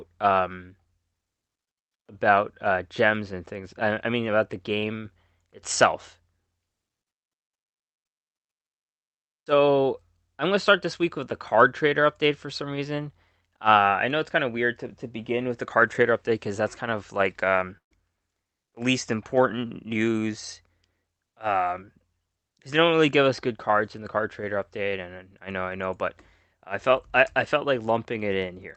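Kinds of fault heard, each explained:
Burst of packet loss: Right after "kind of like um", around 17.77 to 17.93 s, a run of audio never arrived in time to be played. Rather than leave a hole, the receiver stretched the last bit of sound for about 130 ms, fading it as it went, so you hear a brief smeared tail sinking toward silence. When the audio picks back up, roughly 140 ms of what was said is simply gone.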